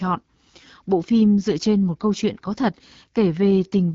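AMR wideband (HD Voice) codec damage runs through the whole speech clip. The rough, raspy texture suggests one of its lowest modes, around 8.85 kbit/s, and nothing remains above 7.5 kHz.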